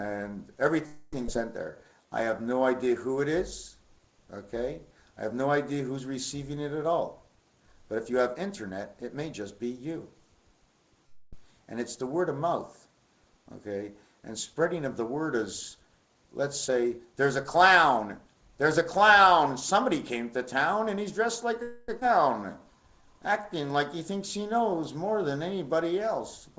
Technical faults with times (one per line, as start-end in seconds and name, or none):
0.86-1.15 call audio freeze
1.27-1.29 skip ahead
1.64-2.76 jitter buffer slow-down
6.83-9.32 jitter buffer speed-up
11.06-11.45 call audio freeze
16.68-18.82 jitter buffer speed-up
21.62-21.90 call audio freeze
22.00-22.03 skip ahead
22.40-23.74 jitter buffer slow-down